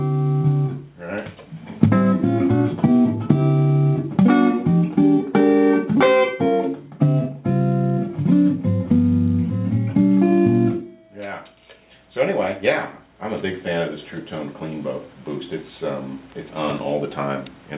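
No faults can be heard anywhere in this recording.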